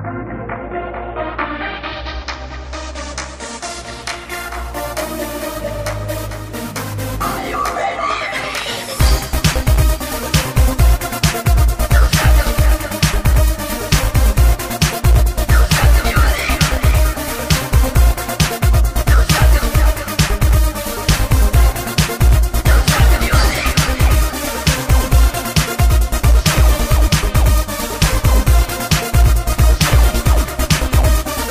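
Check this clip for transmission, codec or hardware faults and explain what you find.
One codec fault is present. At 27.06 to 27.08 s, damaged data in a compressed stream makes the decoder lose frame sync: a brief glitch, seen as a waveform discontinuity.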